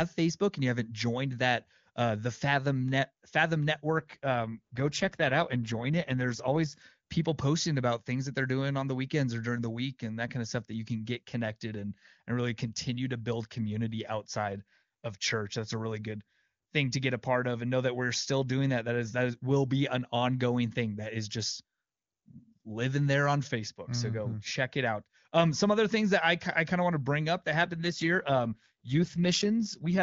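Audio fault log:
3.98–6.82 s and 27.62–30.02 s, AMR rate drop: the speech turns rough and synthetic while the bandwidth holds and nothing drops out. That fits a fall from 23.85 to 8.85 kbit/s.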